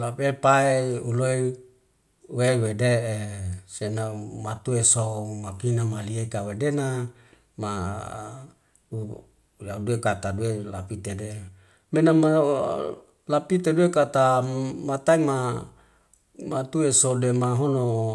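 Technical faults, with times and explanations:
No technical faults are heard in this speech clip.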